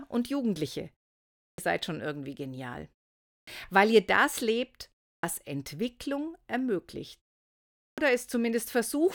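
Clipped start after a pause hits this speech clip at 1.50, 3.39, 5.15 and 7.89 s. After each silent gap of 0.3 to 0.76 s, the output path has dozed off and needs about 82 to 87 ms to wake, so each phrase bursts in abruptly, its opening sounds lost.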